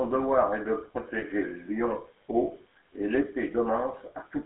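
The whole clip carries the grainy, buzzy roughness of the GSM full-rate codec, which fits the old 13 kbps voice coder. It rebuilds speech from a vocal-tract model driven by sparse regular pulses, so the texture turns gravelly. The line band sits at about 300 Hz to 3.6 kHz.

Right after "devoir est de", from 1.18 to 1.24 s, there's a brief metallic ring where lost GSM frames were covered by repeating the last good frame. That's about 40 ms of sound held and smeared, which points to two dropped frames.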